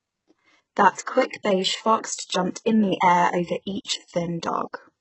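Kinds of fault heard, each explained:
HE-AAC compression: The treble sounds synthesised, not recorded, and s sounds are gritty and metallic. Nothing reaches above 8 kHz. This likely comes from a bitrate near 8 kbps.
Pre-echo: At 0.93 to 0.97 s, a brief hiss of about 41 ms runs ahead of a sharp attack. The codec smeared block noise into the quiet moment before it.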